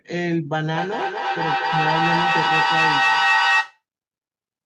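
A second device on the same call replays this microphone's signal, which the microphone picks up again, causing feedback echo between two devices from 0.74 to 3.83 s. The speech returns about every fifth of a second, thinner and ringing, and the repeats build to about 6 dB above the speech.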